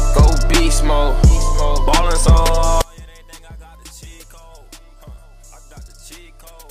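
From 2.82 s to the end the sound drops by about 27 dB and goes faint. That's a likely case of one channel inverted, so whatever both sides share cancels when summed to mono.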